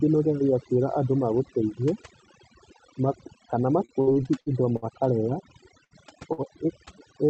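Overdone noise removal, set far too strong, runs through the whole speech clip, switching off frequency bands near the noise floor, so the background twinkles. From 3.85 to 4.85 s, repeated packet loss leaves five gaps, the longest 61 ms, patched with about 240 ms of stretched sound; roughly 120 ms is gone, giving a choppy, robotic texture. At 5.84 to 5.94 s, a burst of packet loss drops about 60 ms outright, the fill of 64 ms decaying into a held buzz or hiss before the audio jumps ahead. At 6.33 to 6.41 s, a short stall from a late packet holds the last sound for 56 ms, then resumes with nothing missing, heard as a brief drawn-out sound with a slight buzz or dip.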